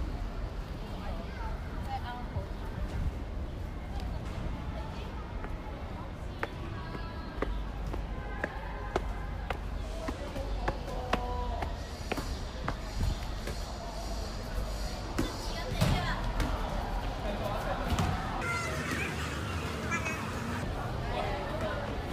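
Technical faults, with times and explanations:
17.05–17.29 s, loud pop: two sharp pops about 10 dB above the sound, which continues underneath, likely from a brief voltage pulse such as a switch or static discharge.
18.42–20.63 s, section at the wrong speed: this stretch plays at 2.0 times normal speed, hurried and raised around ten semitones, likely from playback on a mismatched clock.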